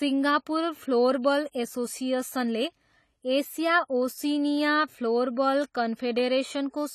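Throughout, the speech is dull and smeared with fizzy sibilants, likely AAC compression at a low bitrate; a spectrogram shows nothing above 14 kHz.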